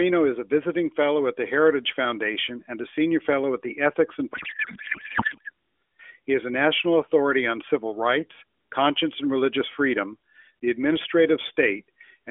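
Codec payload misread from 4.33 to 5.49 s breaks up this speech clip, which otherwise carries the narrow 300 Hz to 3.4 kHz band and light coloration of the AMR narrowband mobile codec. For just over a second the voice gives way to garbled noise and warble that barely tracks it. That fits octet-aligned AMR frames being unpacked as bandwidth-efficient, so the decoder accepts plausible frames whose fields sit in the wrong bit positions. Clean decoding resumes once the packing matches again.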